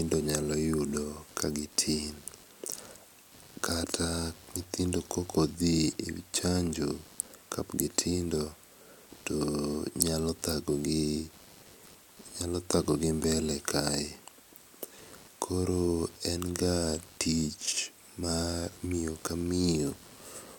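From start to finish there's computer activity noise running under the speech, a buzzy, chirping layer pulsing somewhere around a hundred times a second and sitting roughly 30 dB below the voice. It doesn't follow the talking at all; it shifts with whatever the machine is doing. The processor, graphics card or mouse pulling changing current is disturbing the ground the audio circuit shares, and that wobble leaks straight into the recording.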